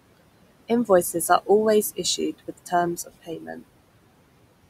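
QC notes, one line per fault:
Throughout: noise suppressor artifacts. The background sits about 17 dB below the speech, and the suppressor pulls it down by about 21 dB in the bands it reads as steady noise, frame by frame. Between phrases the noise sinks away, and it rises again under the speech. On a spectrogram the noise floor shows as blotchy, patchy energy that appears and vanishes in time with the speech rather than as a smooth, even haze.
2.39 to 2.72 s and 2.97 to 3.63 s: speech cut by the noise suppressor. Right after "are always issued", and again a moment later, the suppressor mistakes parts of the speech for noise and turns them down by up to about 15 dB. The first cut takes roughly a tenth of a second of sound and the second roughly a third. The speech it cuts comes out swallowed and faint. The waveform shows sudden dips in the envelope, and the spectrogram shows reduced energy in those stretches.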